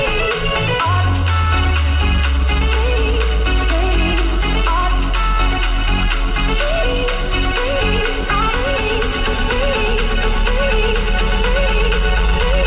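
Nothing here stands out as a fault; the sound simply comes across as a normal call, carried over G.711 A-law at 64 kbps with nothing above 4 kHz, so it has that familiar narrowband telephone character.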